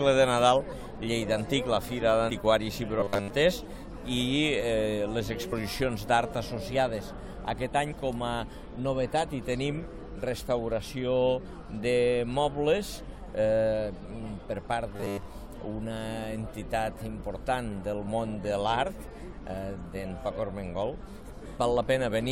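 The audio has compressed frames skipped at 2.29 s, 5.52 s and 7.91–7.93 s. Each is a short jump where a few 23.2 ms frames vanish, shown as a small waveform discontinuity. Robotic sound from repeated short buffers appears at 3.00–3.30 s and 14.96–15.28 s: a rigid 100 Hz buzz drawn as evenly spaced horizontal harmonics, likely from 10 ms buffers repeated over most of the audio.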